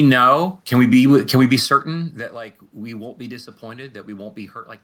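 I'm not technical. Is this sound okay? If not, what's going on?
Yes, no system faults: the background noise is just the room, and the level shift around 2 s is the talker moving relative to the microphone.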